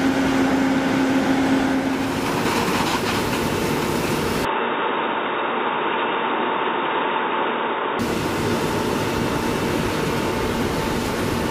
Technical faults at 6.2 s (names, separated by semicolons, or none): input switched to a poorer device